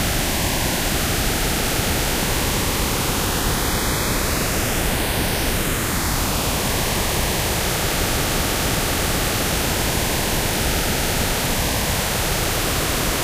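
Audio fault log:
0.68 s, 7.00 s and 11.71 s: dropped buffer (overrun). The sound jumps ahead with no silence. About 70 ms is missing at 0.68 s, about 20 ms at each later point. Likely cause: samples were overwritten before being read, so the surrounding audio is spliced directly.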